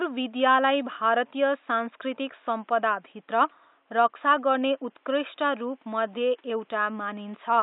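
No technical faults occur anywhere in the recording, and the faint room noise, about 41 dB below the speech, belongs to the recording itself.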